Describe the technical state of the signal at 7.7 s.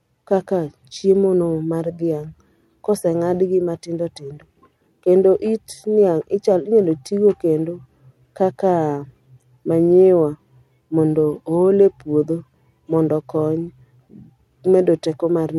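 At 7.7 s the speech signal is intact, with no audible fault at that moment.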